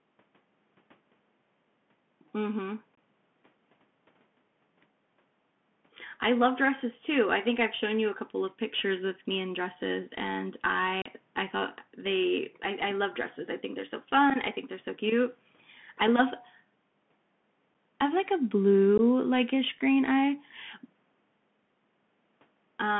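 From start to finish the speech carries the Bluetooth CVSD headset codec at 64 kbps. Its one-bit delta coder adapts its step too slowly for fast, loud high content, so s sounds turn scratchy over a granular hiss. The band also stops near 3.4 kHz, narrower than a wideband headset link.

Unconcealed Bluetooth headset packet loss leaves sharp-edged silent gaps at 2.95–2.97 s (22.5 ms lost), 11.02–11.08 s (37.5 ms, the longest), 14.30–14.32 s and 17.74 s (7.5 ms each), and 18.98–19.00 s (15 ms). Nothing fills the holes, which is what separates this from concealed loss, and the sound returns briefly quieter after each one.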